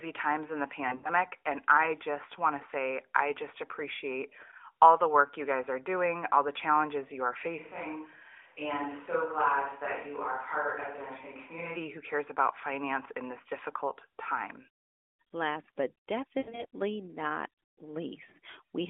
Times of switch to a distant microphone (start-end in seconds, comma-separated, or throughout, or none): 7.60-11.75